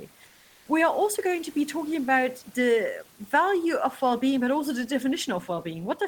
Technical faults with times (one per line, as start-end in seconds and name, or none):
0.26-0.68 comfort noise in place of the background